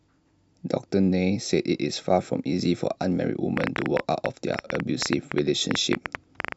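A speech recording with a train of clicks running from 3.57 s to 6.53 s: about 30 sharp ticks at roughly 10 per second, unevenly spaced, peaking around 15 dB above the speech. The likely cause is electrical interference or a faulty connection or power supply. The waveform shows narrow spikes, and the spectrogram shows thin full-height vertical lines.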